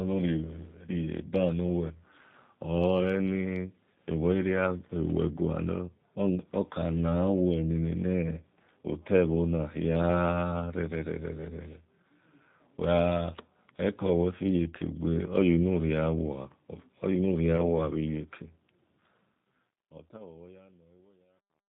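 Throughout, the speech sounds slightly rough, synthetic and dull, with nothing above 4 kHz. This points to the G.729 codec at about 8 kbit/s, rebuilding each frame from a filter and sparse pulses.

From 17.57 to 17.62 s, a brief stretched smear replaces the sound and stays weak afterward. This is VoIP packet loss concealed by the speech codec, consistent with one missing 10 ms frame being extrapolated.

From 19.16 s to the end, the smooth fade-out turns gritty, and from 19.9 s the grit is at its worst. This is truncation distortion on a fade, which fits a 10-bit gain stage without dither.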